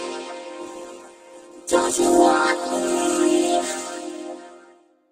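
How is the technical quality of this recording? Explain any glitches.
There's one real glitch: a call bitrate drop from 0.64 to 4.33 s. The audio goes rough and muffled as the codec starves for bits and trims the highs, which fits a fall from roughly 64 to 13 kbps, bottoming out for about 1.36 s before recovering.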